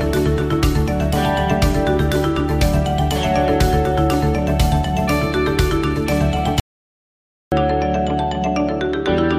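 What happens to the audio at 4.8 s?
Nothing goes wrong at 4.8 s: the audio runs on intact through that moment, with no dropout, glitch or distortion.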